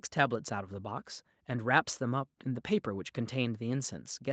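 No technical faults are audible.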